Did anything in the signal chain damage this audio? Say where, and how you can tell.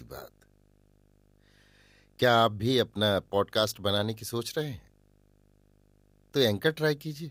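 Yes: a steady 50 Hz buzz with hash and a faint 15.6 kHz whine runs under the speech throughout. This is video or display buzz, with a screen or video cable coupling into the analogue wiring.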